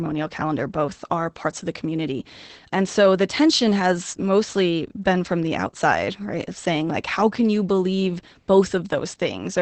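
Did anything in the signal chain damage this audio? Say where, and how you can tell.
Yes. The damage is at the codec stage, and the cause is Opus voice compression. Throughout the speech, SILK linear prediction has coded the excitation coarsely within a wideband limit, which fits a bitrate around 12 kbps. That leaves the voice plainly muffled, hoarse and faintly robotic.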